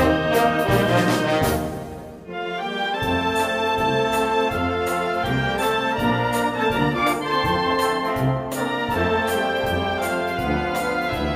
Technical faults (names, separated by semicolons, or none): none